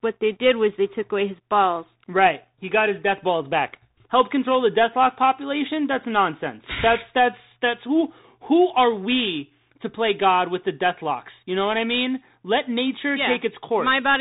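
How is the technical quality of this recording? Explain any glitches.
Quality's pretty rough, and it's down to the Bluetooth CVSD headset codec running the whole way through. CVSD sends a single up-or-down bit per sample with an adapting step, which fits a 64 kbps stream, so the speech is cut off above 3.8 kHz, s sounds go scratchy, and there's a grainy hiss underneath.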